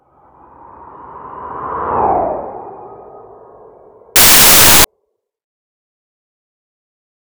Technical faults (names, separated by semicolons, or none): samples built from the wrong bytes